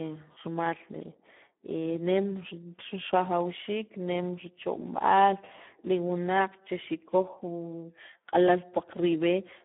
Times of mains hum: none

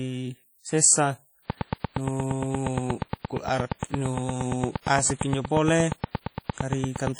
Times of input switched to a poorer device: none

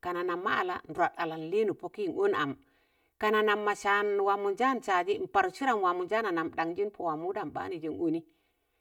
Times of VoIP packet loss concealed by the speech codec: none

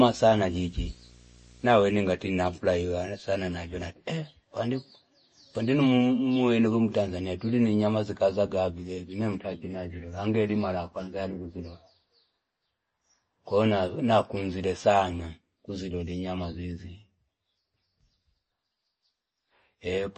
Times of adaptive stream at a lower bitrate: none

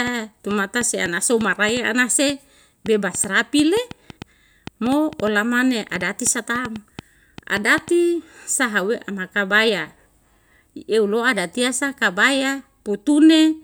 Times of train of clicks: 0.07-7.89

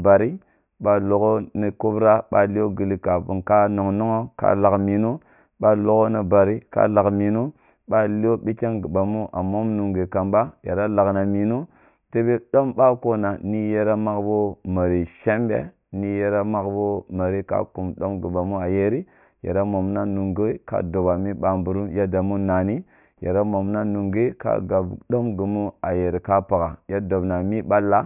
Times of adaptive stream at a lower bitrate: none

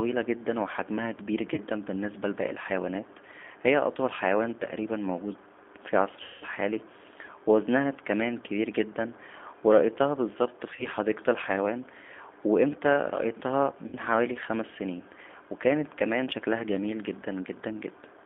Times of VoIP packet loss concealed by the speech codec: 1.54-1.61, 6.23-6.45, 10.76-10.86, 13.87-13.97

